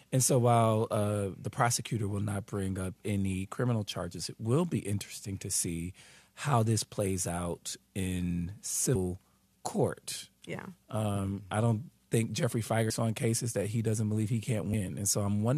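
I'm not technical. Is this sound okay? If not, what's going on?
No. At 8.94 s, just after "this plays out in", about a fifth of a second of speech is missing. At 12.89 s, just before "on cases that he", about three tenths of a second is missing. At 14.72 s, a shorter bit is missing. These are compressed frames skipped. Chunks of the compressed file were lost or rejected as damaged, so playback jumps ahead.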